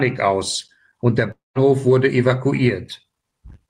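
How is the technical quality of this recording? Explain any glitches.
One glitch breaks the speech. From 1.31 to 1.58 s, a likely long network dropout: the last sound smears into a fading buzz, then about 170 ms of silence, and speech resumes with roughly 240 ms lost, unlike a clean edit cut.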